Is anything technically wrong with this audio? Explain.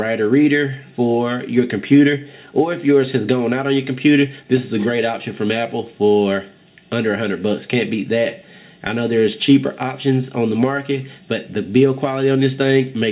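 No, nothing here is technically wrong.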